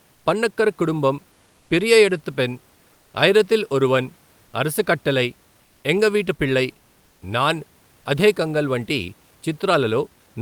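Comfort noise in place of the background fills short pauses at 0.13–0.25 s, 2.93–3.13 s, 4.45–4.53 s and 7.05–7.21 s. The room's background gives way to flat, featureless hiss about 1–2 dB quieter, likely from discontinuous transmission. From 0.71 s to the end, low bit depth without dither adds grainy distortion that tracks the speech, well below it. This fits truncation to likely 10 bits.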